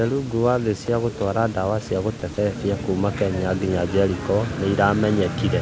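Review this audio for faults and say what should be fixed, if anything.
The sender's voice detector likely misjudged quiet stretches of speech as background and briefly stopped transmitting, so the receiver filled the gaps with comfort noise. This is sound dropped by the voice detector: short bits of speech are swapped for steady noise. It happens at 0.86 s, between "rũngũ wa thĩ" and "gũtwara dawa cĩa", then at 2.2 s and from 2.34 to 2.38 s, both after "gũtwara dawa cĩa". The room noise sits about 24 dB below the speech, and the detector seems to be cutting in against speech rather than that noise. To prevent this, lower the detector's aggressiveness or lengthen its hangover time, or turn off discontinuous transmission.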